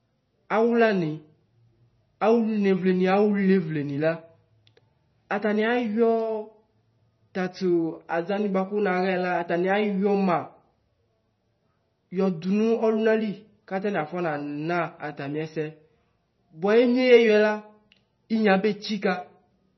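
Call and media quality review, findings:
MP3 compression artefacts, whole clip. Speech sounds watery and swirly, s sounds come out metallic and chirpy, and consonant attacks smear. Nothing at all above 5.9 kHz, so there's a hard treble cut-off. Damage is heavy, which fits a low bitrate somewhere around 24 kbps. Likely an MP3 encode that ran short of bits: it chopped the top end and dropped weak frequency lines, which then flicker on and off from frame to frame.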